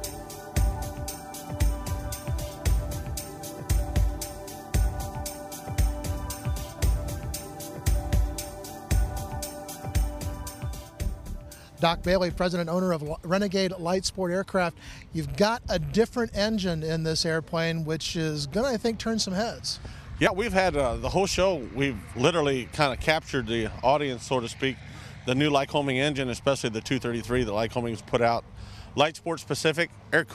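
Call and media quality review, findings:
Small jump forward at 12.56 s, no gap of silence, just a hard splice where a short slice of audio, around 20 ms, is missing. Same thing again at 20.27 s. Sounds like a dropped buffer (overrun), likely on the capture side: the app didn't read the input buffer in time, hardware overwrote it, and the audio either side got butted together. Worth checking capture thread scheduling.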